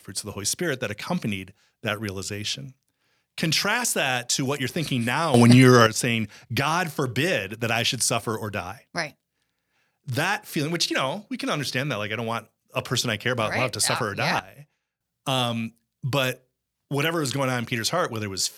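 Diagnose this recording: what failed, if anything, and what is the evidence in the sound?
Sudden gain jump at 5.34 to 5.87 s, after "what you're thinking now", up about 11 dB, and at 14.39 to 15.01 s, after "love to suffer or", down about 12 dB. Speech and background noise step together without a ramp, likely an unsmoothed digital gain change in call processing.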